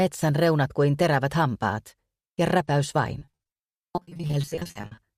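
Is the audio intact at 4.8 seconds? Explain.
No. Repeated packet loss (robotic sound) covers 3.19 to 4.99 s, so 4.8 s sits inside it. Over that stretch more than thirty short holes open up, none longer than 40 ms. Each is patched by extending the preceding sound, about 740 ms of patching in total, roughly 41% of the span. Because the holes come so close together, the audio there is choppy, with pieces missing.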